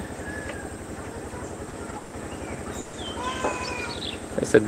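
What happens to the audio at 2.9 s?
A call audio freeze runs from about 2.79 to 2.96 s. For roughly 140 ms the last sound is stretched out as a fading, smeared tail instead of moving forward. It never drops to silence. When the audio resumes, it picks up exactly where it stopped, so nothing is lost. Everything after the freeze now runs about 140 ms late. The likely cause is packets held up in transit, which let the receiver's jitter buffer run dry until they arrived.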